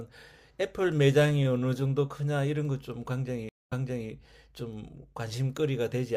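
At 3.49 s a stream reconnect cuts the speech to 0.22 s of silence. Playback then resumes about 0.39 s earlier, repeating audio, which a plain dropout wouldn't do.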